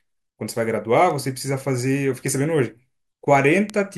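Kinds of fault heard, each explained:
Bit error spike: a single flipped bit makes one to three samples jump by a power of two and snap straight back. This gives a lone broadband tick at 1.1, 2.27 and 3.7 s, peaking about -22 to -10 dBFS. Unlike a dropout click, no sound goes missing around it.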